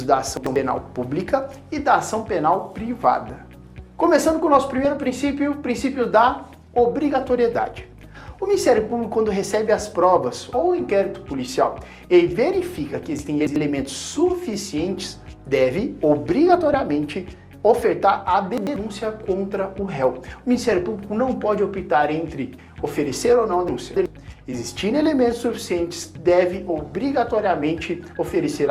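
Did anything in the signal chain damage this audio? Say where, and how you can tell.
Yes. Chunks out of order at the buffer stage: at 0.37–0.56, 13.19–13.56, 18.58–18.76 and 23.68–24.06 s a 93 ms chunk plays one or three chunks late. That gives a jumbled moment with hard joins.

DAB burbling from weak reception: burbling at 4.85–5.04, 7.56–7.59 and 16.74 s. Bit errors of around a tenth of a percent get past correction and corrupt the MP2 sub-bands.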